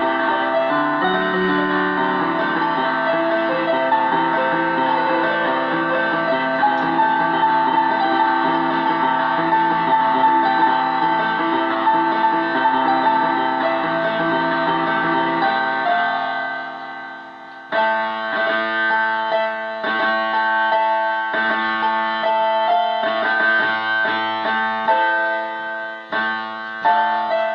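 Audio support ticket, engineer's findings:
No faults found; the audio is consistent with a normal call path, with the top end rolling off around 12 kHz as expected from the call codec.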